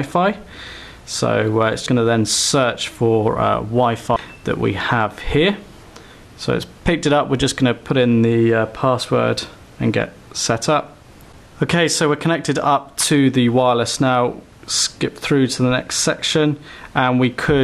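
Brief smeared blips at 0.60 s, 1.86 s and 4.16 s mark where the sound jumps ahead by roughly 100, 200 and 300 ms. These are compressed frames skipped: whole frames never decoded. The jumps fit frames of about 26 ms, and overlap blurs each join rather than clicking.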